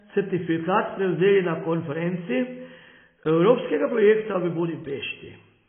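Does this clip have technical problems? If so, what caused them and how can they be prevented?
Yes. Throughout the speech there is nothing above about 3.5 kHz, and the band-limited, smeared quality of a very low-bitrate encode is present even though the file itself is a high-bitrate MP3. This is likely low-bitrate audio saved at a high bitrate: the sound points to an earlier pass through something like 16 kbit/s AAC, and re-encoding at a rate near 256 kbit/s could not restore what that first codec had already discarded. To prevent it, encode from the original uncompressed source rather than from a compressed copy.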